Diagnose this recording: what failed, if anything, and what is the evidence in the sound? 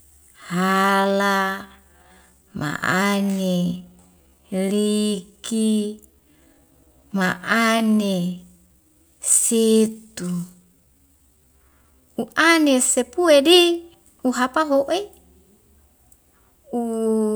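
From 0.0 to 12.14 s, ending just before "u'ane sepue di", the speech runs at 0.603x speed with pitch unchanged. This time-stretched section likely came from stretching software at the editing stage. It drags. A spectrogram shows normal harmonic spacing but drawn-out syllables, and the waveform repeats short grains before normal pacing snaps back.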